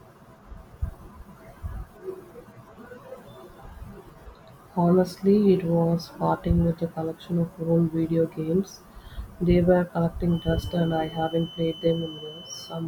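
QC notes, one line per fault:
10.26 s to the end: feedback whistle. A thin, steady 3 kHz tone sits behind the speech, slowly swelling and fading in level, about 20 dB down. Likely the speaker-to-mic loop sitting right at the edge of feedback, so it rings without running away.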